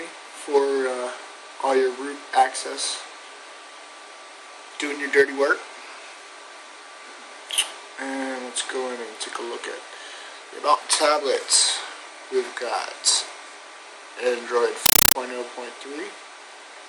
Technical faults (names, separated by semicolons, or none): compressed stream played as audio